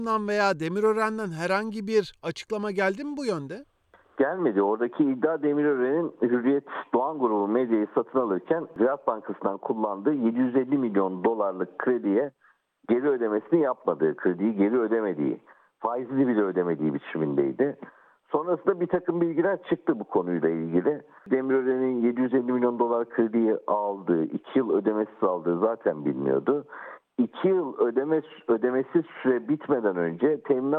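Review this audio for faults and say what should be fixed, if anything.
Nothing here needs fixing, so you can leave this one as it is.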